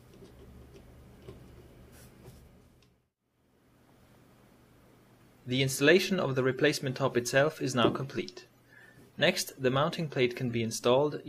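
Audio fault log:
No fault is found in this audio.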